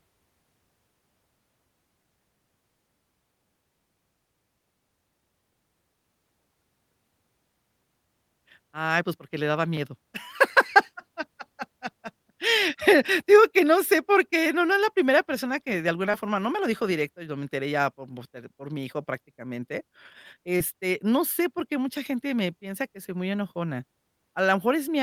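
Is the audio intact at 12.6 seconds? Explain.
Yes, at 12.6 seconds the speech is intact, with no dropout, click, distortion or other technical fault to be heard at that point.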